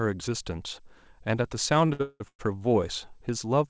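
Between 1.86 and 2.41 s the speech drags and stutters through four brief freezes, the longest about 187 ms, where sound is held and smeared rather than lost. These are repeated stalls (stutter): late packets drained the jitter buffer, so the receiver stretched the last audio for 390 ms, about 71% of that span.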